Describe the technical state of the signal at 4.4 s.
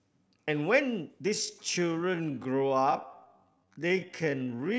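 At 4.4 s the speech sits inside a time-stretched section running from 1.30 s to the end, slowed to about 0.57 times its pace with pitch unchanged, likely from software repeating short pieces. It sounds dragging; a spectrogram shows horizontally drawn-out harmonics, and the waveform shows repeating grain patterns.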